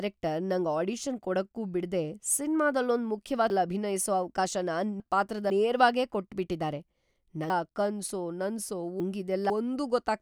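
A speech clip with two spots where chunks come out of order, 3.5 to 5.5 s and again 7.5 to 9.5 s. In each two-second stretch, one half-second chunk that should have played first turns up three chunks late, after the material meant to follow it. Nothing's missing, but the sequence gets scrambled, so you hear a jumbled moment with three hard joins where mismatched audio butts together.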